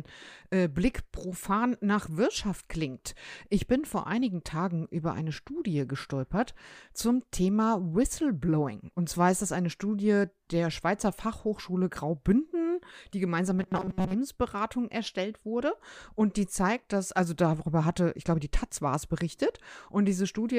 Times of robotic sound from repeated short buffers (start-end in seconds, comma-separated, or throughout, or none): 13.59-14.13